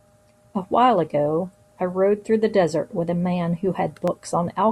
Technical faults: clock drift buffer slips

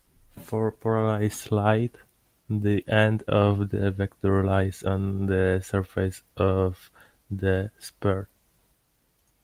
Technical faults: none

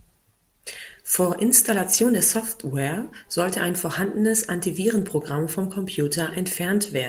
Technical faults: lost packet rebuilt from error correction

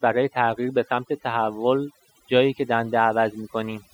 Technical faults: overdone noise removal

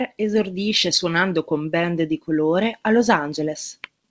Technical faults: none

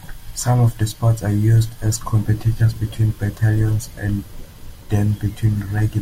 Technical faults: none

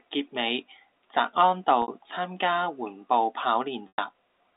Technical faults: packet loss with pitch repetition

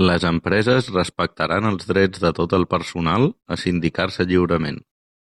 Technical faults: none

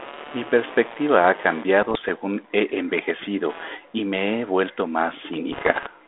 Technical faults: computer activity noise; bit errors on an ADPCM link

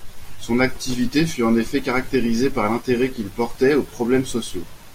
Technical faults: none

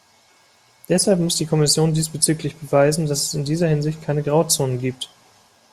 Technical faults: none

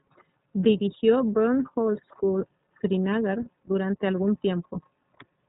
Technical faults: iLBC codec

